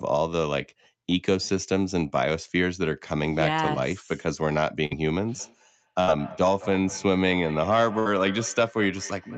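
At 4.85 s a burst of packet loss begins: about 53 ms of the last sound is stretched into a fading buzz or hiss rather than silence, then about 60 ms of the audio is skipped.

From 5.39 s to the end there is feedback echo between two devices. Distinct repeats come back roughly every fifth of a second, thinning and ringing, peaking about 17 dB below the speech. Unlike room reverberation, which decays smoothly, these repeats arrive at a fixed interval.

The same packet-loss pattern returns at 6.01 s, where about 64 ms is filled, and at 7.99 s, where about 63 ms is filled. Each time about 60 ms of audio is missing afterwards.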